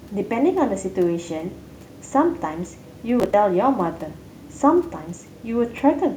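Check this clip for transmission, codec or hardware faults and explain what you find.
A single fault: a burst of gritty, tearing crackle over the speech from 3.2 to 3.34 s. This is processor overload crackle. The processor repeatedly failed to deliver its small audio buffers on time, and each missed block was skipped outright. The tiny hard-edged gaps, spaced in a way that fits buffers of around 10 ms, merge into the crackle, which stops once the load eases.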